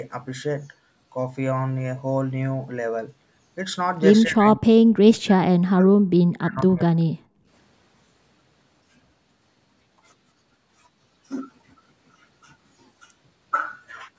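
From 4.26 to 4.72 s, 5.02 to 6.06 s and 6.36 to 6.96 s, the speech drops by around 40 dB. This is speech suppressed in double talk, likely from an echo canceller attenuating the near talker while the far end spoke.

At 7.24 to 7.47 s, the background gated by the echo canceller shows as a brief hole in the room sound, down about 36 dB. The canceller clamped the microphone during loudspeaker playback, then released it.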